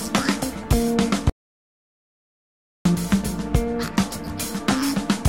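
At 1.30 s the sound cuts to an audio dropout to silence, with no room tone, until 2.85 s; likely a lost input link.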